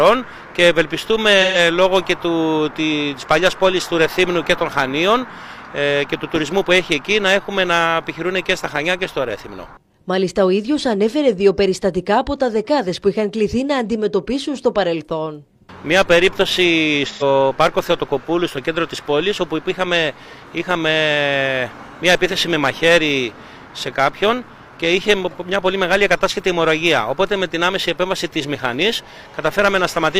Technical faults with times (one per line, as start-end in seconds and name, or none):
1.42-1.58 AAC frame loss with concealment
17.08-17.23 AAC frame loss with concealment